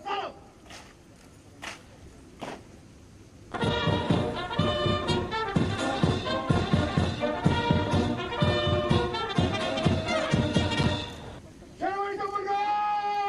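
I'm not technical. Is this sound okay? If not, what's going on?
No. From about 10.06 to 13.15 seconds you can hear a tick roughly every second, about four in all, evenly spaced like a clock. These are periodic USB or driver dropouts: some other task on the computer briefly held up the audio connection at a fixed interval, and each time a tiny sliver of sound, a fraction of a millisecond, was lost and replaced by silence. That sudden gap is what makes the tick.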